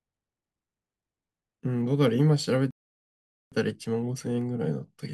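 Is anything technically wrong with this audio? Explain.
Yes, there is a playback stall from 2.71 to 3.52 s. The player likely ran short of data or had its thread blocked, so output stopped feeding the device. The speech cuts off mid-flow into about 0.81 s of silence before it resumes.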